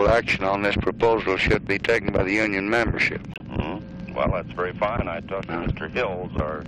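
From 0.01 to 3.05 s, hard clipping: the signal is driven about 8 dB past what one stage can pass, so peaks show flat-topped waveforms, harsh fuzz, and harmonic smear high up the spectrogram. At 3.34 s, a corrupt frame muted leaves an abrupt 80 ms silent gap, consistent with about three rejected compressed frames, visible as a flat line and blank spectrogram column.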